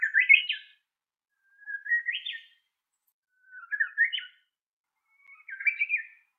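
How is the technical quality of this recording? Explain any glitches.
Two network dropouts disturb the recording, one brief and one longer.

At 0.43 to 0.49 s there is a short concealed packet loss: about 40 ms of audio never arrived in time, so the receiver extended the preceding sound to cover the hole and then blended back into the real signal. It comes across as a quick smear or wobble.

From 1.93 to 2.01 s a burst of packet loss removed about 60 ms. The receiver continued the last sound while fading it down, so a held buzz or fading hiss bridges the gap, and the audio resumes slightly further on with that stretch missing.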